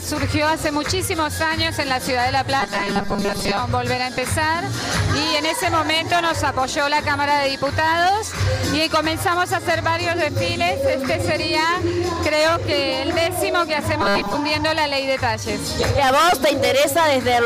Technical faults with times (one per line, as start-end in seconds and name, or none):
2.60-3.59 robotic sound from repeated short buffers
14.02-14.34 robotic sound from repeated short buffers